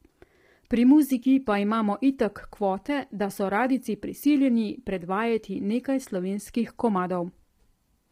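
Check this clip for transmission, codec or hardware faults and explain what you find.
One codec fault runs through the whole clip: low-delay AAC compression. The voice sounds rough and grainy from start to finish, with noise filling the gaps between harmonics and a thin, artificial top band. The likely cause is AAC-ELD at a low rate, fitting roughly 24 kbps. Its short frames resolve pitch harmonics poorly, and at this low rate bits run out. Unlike packet loss, the damage is constant, with no dropouts or gaps.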